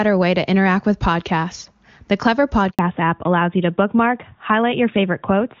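At 2.71 s the audio cuts out for 80 ms in a handover gap: the call switched networks and no speech frames arrived meanwhile. Unlike ordinary packet loss, nothing fills the hole with smeared or repeated sound; it is plain silence, and the voice returns changed.

From 2.79 s to the end comes a fallback to narrowband. The link dropped from HD Voice to an older codec, and everything above 4 kHz disappears, leaving speech duller and rougher. Before this point the wideband sound, clear enough to suggest a high AMR-WB rate, carried detail up to 7 kHz. Low-rate wideband rasp would keep that upper band, but here it is entirely gone.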